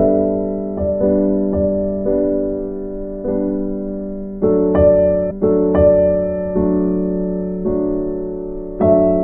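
A stream segment is repeated from 5.30 s to 6.30 s. The player fetched or queued the same stretch of the music stream twice, so about one second of material plays again immediately after it first finishes, adding 1.0 s to the running time. At the jump back there is a small blip where the end of the segment meets its own beginning. The music then continues on from the end of the repeated stretch.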